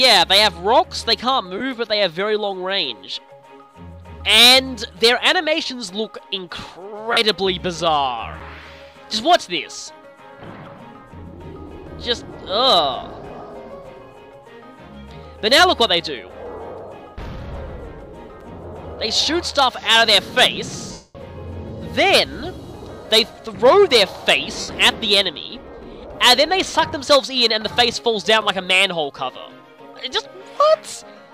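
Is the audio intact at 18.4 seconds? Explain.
No. At 18.41 s there is a gap between chunks: a hole of about 6.5 ms. The audio was cut into 10-second blocks, and this join was played or stored with a little silence inserted instead of running straight on. It is heard as a brief break. Unlike a dropout, no sound is missing here. The audio pauses and then resumes exactly where it stopped, so nothing is skipped.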